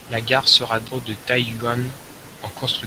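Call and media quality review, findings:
CD skip at 0.88 s: tick with a very short mute of several milliseconds, then speech resumes from another point on the disc. Laser likely jumped a spiral track. Waveform: brief flat gap, discontinuous resume. Spectrogram: thin vertical broadband line. Light Opus hybrid coding present.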